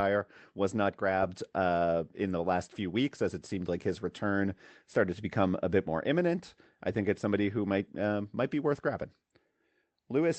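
There are no technical faults to describe in time order in this speech.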